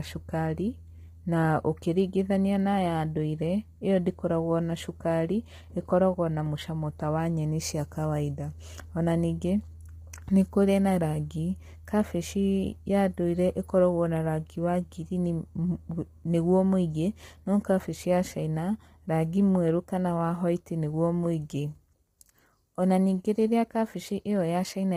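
Low-delay AAC compression runs through the whole speech clip. The voice sounds rough and grainy, with noise filling the gaps between pitch harmonics, and nothing is present above 15.6 kHz. The likely cause is AAC-ELD coding at a low bitrate, consistent with about 24 kbps. Its short frames cannot separate closely spaced harmonics cleanly, so the coder spends scarce bits coarsely and leaves heavy quantisation damage across the voiced sound.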